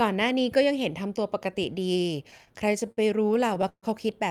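Packets reached the receiver late or slower than playback, so the jitter buffer kept running dry between 2.31 and 3.85 s in this speech clip, causing repeated stalls (stutter). Seventeen times the last sound was stretched to cover the wait, about a third of a second in all, the longest hold 139 ms. Nothing is lost, but the speech drags and stutters.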